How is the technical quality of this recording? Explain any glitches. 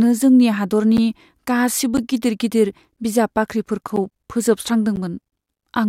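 The recording has periodic USB or driver dropouts. From 0.97 s to 4.97 s, once every 1.0 s, the speech cuts out for about 10 ms. Something blocks the USB bus or audio driver at a fixed interval, so a small block of samples is lost and replaced with silence. Each gap is heard as a regular tick within the speech.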